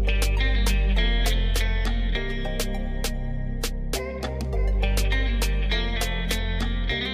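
No technical faults can be heard anywhere in the audio, and the signal stays steady and intact throughout.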